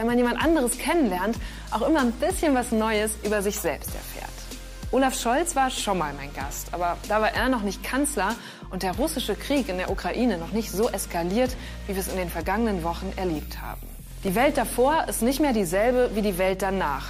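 At 14.07 s there's a short burst of processor overload crackle lasting until about 14.28 s. The processor couldn't finish its tiny buffers, a few milliseconds each, in time, so a handful dropped out as hard-edged gaps of silence, heard together as gritty tearing.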